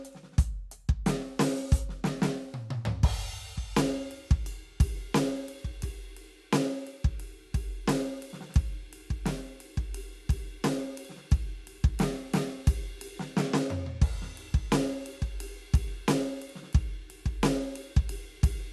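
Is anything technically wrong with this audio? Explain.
Yes. At 2.29 s the music hits an underrun with held sample: the buffer empties, the converter holds its last value for 0.67 ms, and playback resumes past about 0.7 ms of lost audio.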